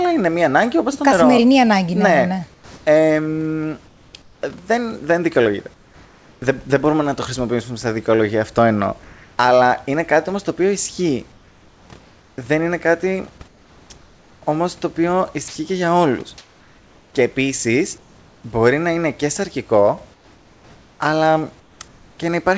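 At 2.54 s some sound is cut short: about 120 ms of speech vanishes into flat hiss until 2.86 s. This is sound dropped by the voice detector, which likely mistook it for background and stopped transmitting. On the waveform the speech envelope falls abruptly to a thin, even band. The same thing happens at 15.48 s, where an 80 ms fragment disappears.

Comfort noise in place of the background fills the pauses from 2.54 to 4.42 s, from 5.74 to 6.42 s, from 9.04 to 9.38 s after "στα δικαιολογία αυτό εννοώ", from 11.32 to 18.44 s after "όμως το οποίο ισχύει", and from 20.14 to 22.18 s after "να είναι και σαρκικό". During these stretches the real room background, sitting about 30 to 33 dB below the speech, gives way to a steady, featureless hiss. This is likely because the sender stopped sending during silence and the receiver generated noise to fill the gaps. The substitute runs about 2 dB quieter at 5.74 s and about 1 dB quieter at 9.04 s. 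On a spectrogram it appears as a smooth, uniform noise floor without the grain of real ambience, and, like the rest of the call audio, it shows nothing above 8 kHz.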